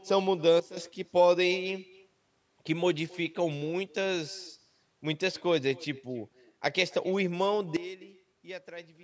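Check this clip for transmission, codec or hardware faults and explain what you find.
Two kinds of fault are present in this speech: an uncancelled echo that runs through the whole clip and two abrupt drops in level.

Echo with no canceller, throughout: the far end plays the call through a loudspeaker, and its microphone sends that sound straight back with nothing removing it. Each phrase returns about a third of a second later, about 23 dB quieter, as a faint, thin shadow trailing the speech.

Sudden gain jump, from 0.60 s to 0.77 s and from 7.77 s to the end: speech and background noise fall together in a single step, by about 12 dB the first time and about 16 dB the second, with no fade in between. The likely cause is a digital gain change applied instantly rather than ramped.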